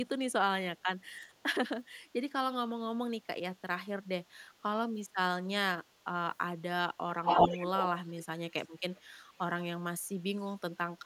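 Echo leak at 7.24 to 7.87 s, 8.05 to 8.23 s and 8.96 to 9.13 s: a copy of the speech returns 365 ms late, first louder than the original, then faint. It's likely a far-end loudspeaker the echo canceller didn't fully catch.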